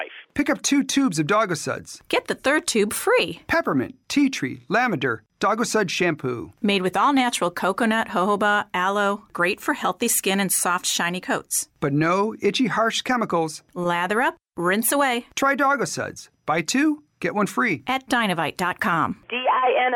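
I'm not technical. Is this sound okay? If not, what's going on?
Yes, nothing in this recording points to a technical problem; the signal comes across as steady and intact the whole way.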